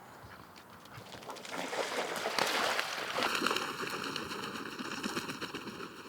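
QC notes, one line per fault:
3.27 s to end, channel delay (comb filtering): one channel arrives roughly 0.7 ms late, and summing to mono cancels shared content at evenly spaced frequencies. The first notch sits around 700 Hz with further notches above, giving a hollow, phasey, thinned sound.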